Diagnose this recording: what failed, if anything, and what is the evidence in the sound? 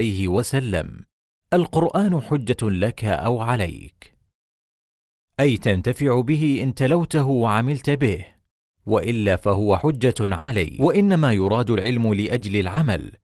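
The fault is scattered short gaps at the network stage, between 9.73 and 12.78 s. About five brief holes are audible, the longest around a tenth of a second. Each is patched by extending the preceding speech, leaving small ticks, smears and hiccups.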